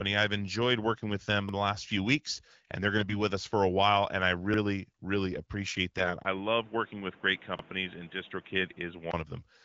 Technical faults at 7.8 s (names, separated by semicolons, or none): input switched to a poorer device